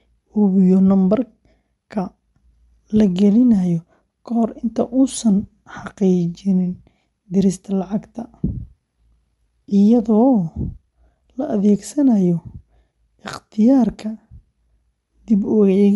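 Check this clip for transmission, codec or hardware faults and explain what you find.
One codec fault runs through the whole speech clip. Throughout, nothing sounds above 11.5 kHz and the highs turn grainy and breathy. This is likely Bluetooth LC3 compression, which fills the emptied upper spectrum with noise, unlike a clean low-pass.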